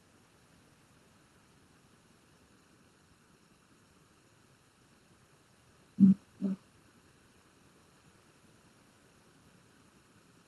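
From the very start and all the way through, there's channel delay causing comb filtering. One channel lags the other by under a millisecond, and when they're folded to mono the shared content cancels at evenly spaced frequencies, first around 700 Hz, so everything sounds hollow and a bit phasey.

On top of that, running the whole length, there's echo with no canceller. The far end's loudspeaker feeds back into its mic uncorrected, so each phrase returns roughly 400 ms later, about 13 dB quieter, as a thinner shadow trailing the speech.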